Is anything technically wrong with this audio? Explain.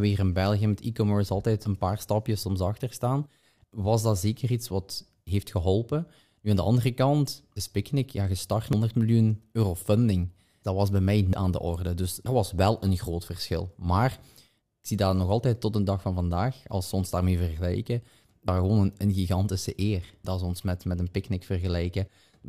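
Yes, there are four sudden skips in the speech, at 8.73, 11.33 (between "was bij mij" and "aan de orde"), 12.26 (just before "was wel een groot") and 18.48 s (between "ze ons daarmee vergelijken" and "gewoon een een gigantische"). Each is a jump forward, losing roughly a fifth of a second, and about a third at 18.48 s. It's likely a dropped buffer (overrun), where samples got overwritten before being read and the edges were spliced together.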